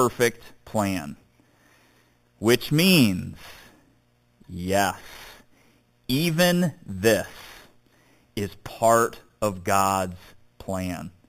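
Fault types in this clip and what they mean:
Imaging from sample-and-hold upsampling: speech raised from 8 kHz to 44.1 kHz by repeating samples unsmoothed, leaving mirrored copies from 4 kHz to 8 kHz, about 13 dB down, heard as metallic fizz throughout.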